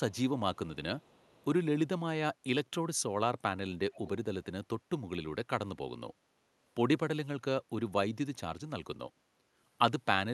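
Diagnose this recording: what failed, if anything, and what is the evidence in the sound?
Echo leak in call processing: a faint delayed copy of the speech trails the talker at 0.11 to 0.18 s, 0.99 to 1.45 s and 3.92 to 4.09 s, each time lagging by 424 ms. The first two scraps sit far down, around 35 dB below the speech, and the third is louder, around 25 dB below. The likely cause is a far-end loudspeaker whose echo canceller failed to fully remove what its microphone picked up, sending those fragments back down the line.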